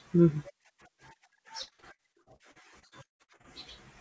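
From 1.62 s to 3.46 s the speech breaks up from repeated packet loss, giving a robotic sound. Packets go missing again and again. Fifteen gaps fall across this stretch, the longest 137 ms. Each gap is patched by stretching the last sound forward. About a third of the span is this patched filler. The result is choppy and robotic, with pieces dropping out. All of it sits inside audio with nothing above 8 kHz.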